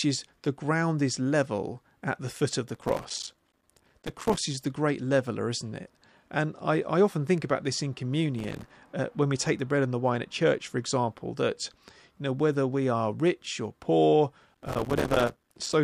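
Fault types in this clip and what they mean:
Processor overload crackle: the processor keeps missing its few-millisecond buffer deadlines, leaving tiny silent gaps that pile into gritty crackle bursts, three times in the speech.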